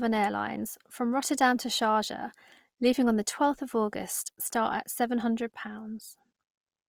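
Throughout, the speech sounds grainy, rough and noisy while still extending to 20.4 kHz, likely from Opus compression in music mode at around 24 kbps.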